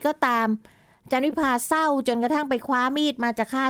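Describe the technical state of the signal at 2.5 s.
At 2.5 s there is a lost packet rebuilt from error correction, spanning 2.49 to 2.55 s. The decoder played low-bitrate copies carried in following packets, which fits two lost 20 ms packets. No gap appears in the waveform, but the spectrogram shows a rougher, noisier, blurred patch.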